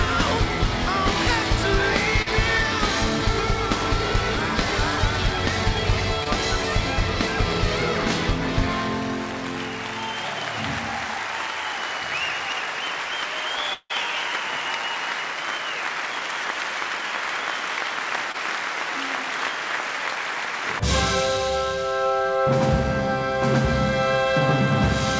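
At 2.22 to 2.28 s, 6.24 to 6.27 s and 18.32 to 18.36 s, short concealed packet loss occurs: 20 to 40 ms of audio misses the decoder, and the receiver extends the preceding sound before blending back in. Each gap is heard as a brief smear or wobble.

From 13.74 to 13.92 s, a long network dropout is likely. About 160 ms never arrives, and the receiver's continuation of the last sound decays into roughly 50 ms of silence before the audio resumes, with that stretch lost. The call path's G.722 coding leaves nothing above 8 kHz.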